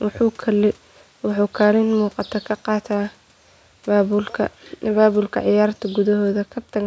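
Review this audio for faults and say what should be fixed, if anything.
Nothing here needs fixing; no faults were found.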